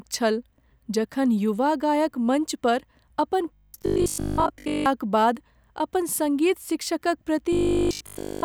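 From 3.54 to 4.86 s the speech turns into robotic sound from repeated short buffers, a rigid metallic buzz near 50 Hz. Most of that stretch is looped audio, likely from a 20 ms chunk replayed while fresh audio was late. It returns at 7.53 s and runs, fully looped, to the end. A spectrogram shows evenly spaced 50 Hz harmonic stripes, and the waveform repeats identical 20 ms blocks.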